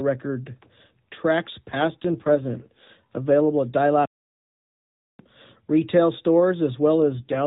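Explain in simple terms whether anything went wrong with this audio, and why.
Two things went wrong. From 1.68 to 2.91 s, and again from 6.96 s to the end, there's an AMR rate drop: the phone codec switched to fewer bits, so the voice turns rougher and more synthetic. Between 4.05 and 5.19 s the audio cuts out for about 1.1 seconds, a playback stall that was likely caused by the player running out of data before it picked up again.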